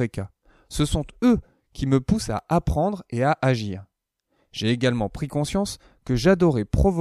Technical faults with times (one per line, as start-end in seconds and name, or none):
2.39 block of digital silence